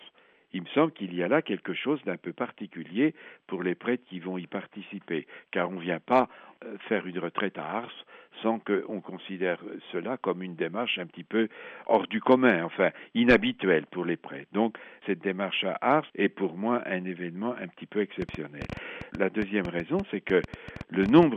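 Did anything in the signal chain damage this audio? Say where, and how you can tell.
Yes. From 18.22 to 21.24 s an irregular train of clicks, about 30 popping ticks near 8 per second and roughly 5 dB above the sound, likely comes from analogue interference or a faulty connection or power supply.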